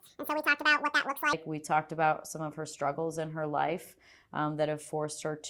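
The audio opens with a section at the wrong speed: from 0.0 to 1.33 s it runs 1.87 times fast, pitched up about ten semitones, likely from a clock mismatch.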